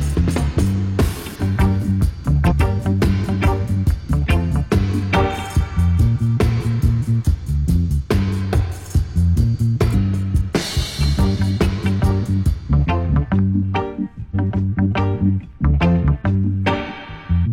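Damaged data in a compressed stream breaks the audio five times: 1.35–1.40, 2.47–2.53, 9.90–9.94, 14.31–14.35 and 17.42–17.48 s. Each lasts about 40 to 60 ms. Corrupted bytes make the decoder misread frames and lose sync. Each break is a brief chirp, squawk, click or hole.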